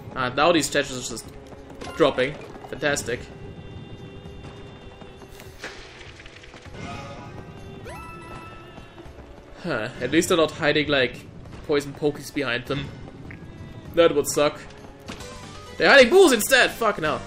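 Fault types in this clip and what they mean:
No fault types can be heard in this clip.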